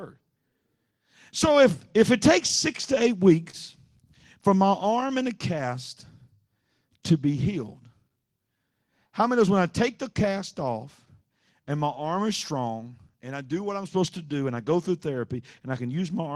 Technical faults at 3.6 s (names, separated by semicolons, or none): clock drift between sender and receiver; repeated timing corrections; short stall from a late packet